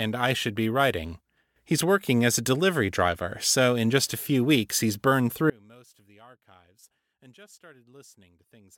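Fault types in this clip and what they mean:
Audio dropout to a faint residue: just after "few weeks he's burned", at 5.50 s, the speech drops abruptly to faint sound about 30 dB below its normal level and stays there to the end of the clip. The likely cause is a signal path that lost its feed but stayed live. Unlike a full dropout to digital silence, a trace of sound remains in the gap, and unlike a fade or pause, the loss is instant.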